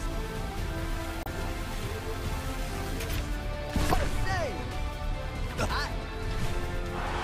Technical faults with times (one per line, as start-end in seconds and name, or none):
1.22-1.27 damaged data in a compressed stream
3.89-3.94 damaged data in a compressed stream